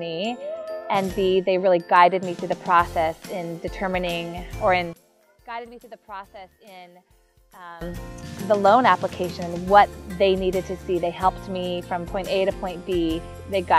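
From 4.93 to 7.81 s the audio falls by about 22 dB and then returns at full level. The likely cause is one channel inverted: with one stereo side flipped in polarity, everything common to both channels cancels when they are summed to mono. What tells this apart from a simple gain dip or dropout is that each channel alone keeps its full level, and the loss appears only in the mono sum. The small residue that survives is the difference between the channels.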